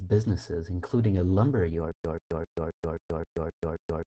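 From the start, the speech sounds muffled and slightly hoarse, with a faint robotic edge, and there is nothing above 8.8 kHz. This is Opus voice compression in its SILK linear-prediction mode at wideband, coding the excitation coarsely enough that the damage is plainly audible, which fits a low bitrate of around 12 kbps with 20 ms frames. The band limit removes the upper air, and the rough excitation produces the buzzy, reedy texture.

At 1.92 s, the sound breaks into a stutter with silent gaps that lasts to the end. A burst of about 134 ms plays, then roughly 130 ms of digital silence follows, and the pattern repeats every 264 ms, eight times in all. The even, mechanical rhythm is likely a stalled player or stream replaying its last buffered fragment on each retry and then running dry. Whatever should have followed is lost.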